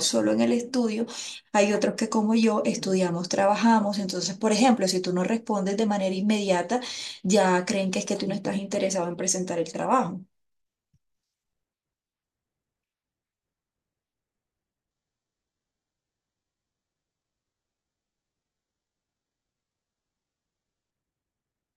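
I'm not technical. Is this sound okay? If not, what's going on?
No. Adaptive stream at a lower bitrate, 14.9 to 20.9 s: the stream suddenly switched to a much lower-quality version, so speech sounds dull and synthetic, without any gap.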